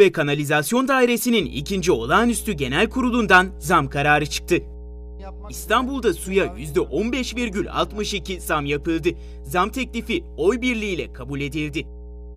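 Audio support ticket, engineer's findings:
Mains hum from 1.39 s to end. Steady 60 Hz tone with low harmonics, roughly 15 dB under signal. Probable ground loop or nearby transformer coupling the power line in. Spectrogram: continuous horizontal line at 60 Hz plus harmonic stripes; waveform shows a persistent low-frequency ripple.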